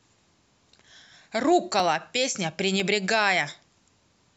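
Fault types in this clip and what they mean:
Periodic USB or driver dropouts: regular ticks once a second from about 1.8 to 3.8 s, where roughly 2 ms gaps of silence interrupt the speech.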